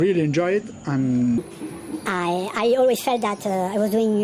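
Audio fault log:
1.38–4.23 s wrong sample rate: audio plays 1.45 times fast and 6.45 semitones sharp, a joint shift that fits 22 kHz material clocked out at 32 kHz.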